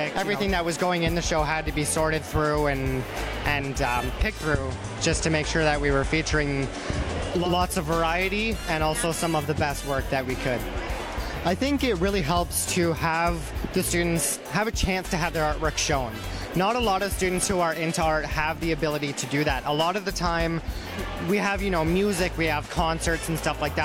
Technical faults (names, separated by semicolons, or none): digital radio blending to analogue